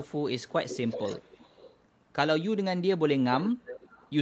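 An echo leak, likely from a loudspeaker end whose echo canceller let its pickup return, adds a faint copy of the speech about 0.38 to 0.39 s late at 0.00–0.22 s, 0.38–1.83 s and 3.38–4.15 s.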